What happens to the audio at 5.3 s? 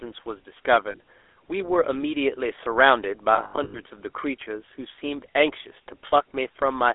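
At 5.3 s the speech carries the same GSM full-rate codec damage heard throughout the clip. The band runs only from about 300 Hz to 3.5 kHz, and the speech is rebuilt from a vocal-tract model driven by regularly spaced pulses, which gives it a buzzy, gravelly roughness consistent with a 13 kbps coder. A plain telephone band-limit would sound narrow but clean. This grating texture is the coder's signature.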